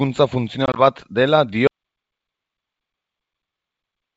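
At 0.66 s, packet loss on an ADPCM call begins and lasts until 0.80 s. About 50 ms of speech is lost across 100 ms in short holes, none longer than 20 ms, and there are roughly five packets' worth. The decoder's predictor falls out of step, so the speech returns slightly distorted after each hole.

At 1.67 s the audio drops out to silence and stays silent to the end. The gap is silent with no room tone. It likely comes from a lost input or stray mute, and the G.722 wideband coding simply carries the emptiness.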